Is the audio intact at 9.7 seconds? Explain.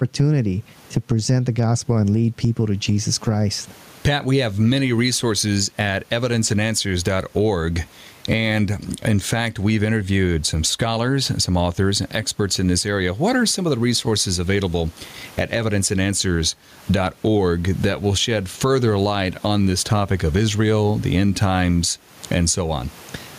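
No. At 9.7 seconds the speech has gain pumping, present throughout the clip. The cause is likely gain set far too high, with a fast limiter pulling it down on each loud syllable. The gain swings around 15 dB, squashing loud and soft parts closer together. Unlike a noise gate, pumping raises the gain between loud sounds rather than cutting the signal.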